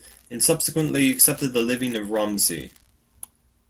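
Speech with a call bitrate drop from 0.66 s to the end: the encoder falls from 40 to 17 kbps, leaving sustained rough, muffled coding rather than packet-loss gaps.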